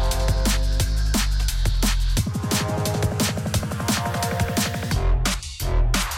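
No fault can be heard anywhere in the clip.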